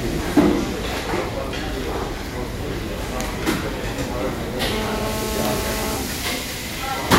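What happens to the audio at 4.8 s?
At 4.8 s a GSM phone buzz is under way. It runs from 4.72 s to 5.97 s. A nearby 2G phone on a call pulses at 217 Hz, and the audio circuit rectifies those bursts. The result is a steady, raspy buzz, rich in harmonics, about 5 dB below the sound.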